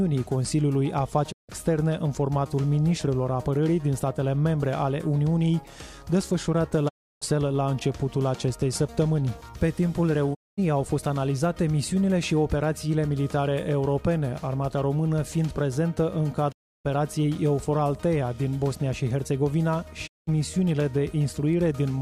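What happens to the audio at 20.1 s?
A digital broadcast dropout cuts the audio from 20.06 to 20.29 s. The receiver stopped getting valid frames, so it muted with a quick fade of about 20 ms rather than playing corrupted data. Whatever was sent in that gap, roughly 0.19 s of programme, is simply gone, and the sound resumes mid-stream. On a waveform this shows as a short taper into a flat line; on a spectrogram, a clean vertical blank band across all frequencies.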